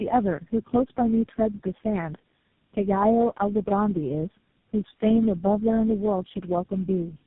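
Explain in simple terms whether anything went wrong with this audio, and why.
Yes, something went wrong, for the whole clip. This is tandem speech coding. The call passed through several phone networks, each squeezing the speech its own way. The roughness suggests about four squeezes in a row. The voice sounds muffled, gravelly and warbly, with nothing above 3.6 kHz.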